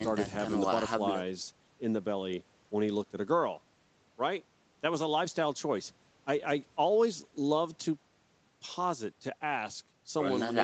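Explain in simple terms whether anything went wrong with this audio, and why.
Nothing went wrong: the speech went through normal call microphone processing and a WebRTC call path with the Opus codec, and the missing content above 8 kHz is just that path's built-in bandwidth limit, not a fault.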